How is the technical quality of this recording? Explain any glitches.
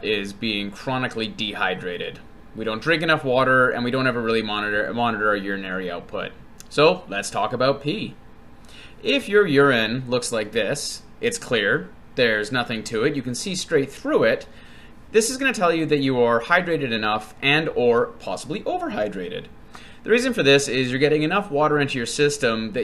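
No technical faults or glitches can be heard anywhere in the recording.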